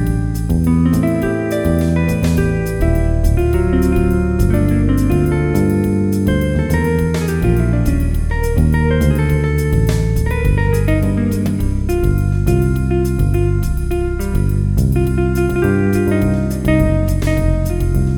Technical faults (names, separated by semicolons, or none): none